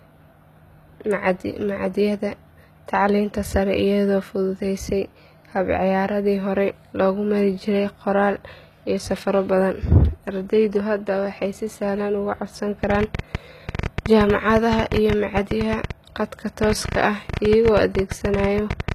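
Throughout this speech clip the treble sounds synthetic, with s sounds turning gritty and lispy and nothing present above 14.9 kHz. The likely cause is HE-AAC compression at a low bitrate, around 20 kbps, where spectral band replication rebuilds the upper band from copied lower bands, so its harmonics fail to line up with the real ones. From 12.84 s to 18.93 s a train of clicks ticks over the sound at an uneven 9.7 per second, around seventy in all, peaking roughly 15 dB above the speech, most likely from electrical interference or a faulty connection.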